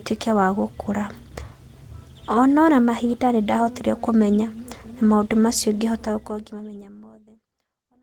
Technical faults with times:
none

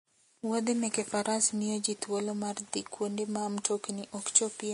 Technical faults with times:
0.00-4.74 Vorbis compression

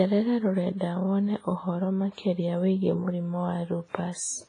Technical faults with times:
0.00-4.48 WMA compression

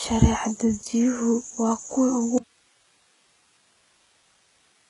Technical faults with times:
0.00-4.89 HE-AAC compression
2.38-4.89 audio dropout to a faint residue

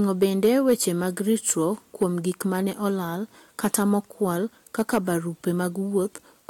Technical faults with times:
0.22-0.73 hard clipping
2.02 hard clipping
3.64-3.95 hard clipping
4.79-4.98 hard clipping

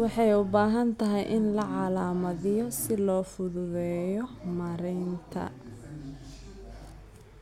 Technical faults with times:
2.45-2.98 drift correction step

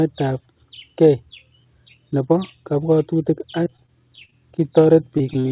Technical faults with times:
3.64-4.34 repeated packet loss (robotic sound)
5.18-5.46 short concealed packet loss

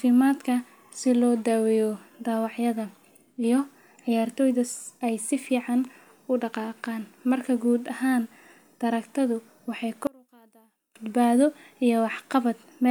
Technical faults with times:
10.07-10.95 one channel inverted

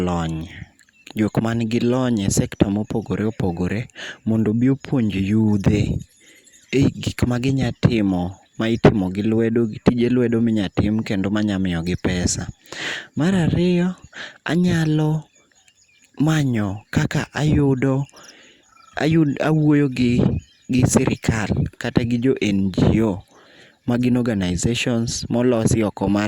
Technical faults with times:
none

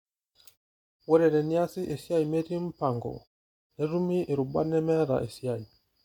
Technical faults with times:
none

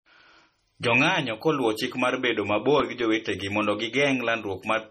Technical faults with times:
0.00-4.90 low-bitrate audio saved at a high bitrate
2.59-3.42 CD scratch ticks

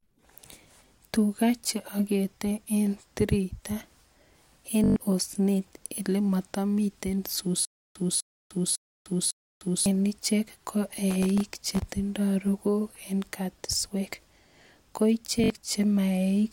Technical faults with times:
4.84-4.96 Bluetooth stutter
7.65-9.86 stutter with silent gaps
11.11-11.85 processor overload crackle
15.44-15.50 Bluetooth stutter

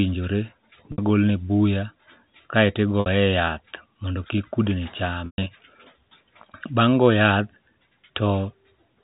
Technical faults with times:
0.92-0.98 packet loss with pitch repetition
3.00-3.06 packet loss with pitch repetition
5.26-5.46 packet loss with pitch repetition

